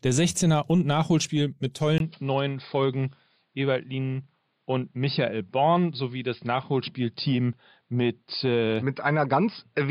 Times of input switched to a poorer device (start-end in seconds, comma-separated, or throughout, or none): 1.98-9.91